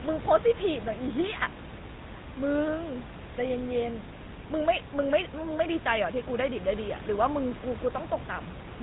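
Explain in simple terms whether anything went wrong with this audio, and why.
Something did go wrong: the whole speech clip has been squeezed through the GSM full-rate codec, the old standard for early mobile phone calls, and you can plainly hear it from start to finish. That codec rebuilds the voice from a rough model of the mouth and throat driven by a coarse pulse pattern, and it throws away everything above 4 kHz. That's where the buzzy, gravelly, muffled phone sound comes from. The background room noise is simply part of the recording.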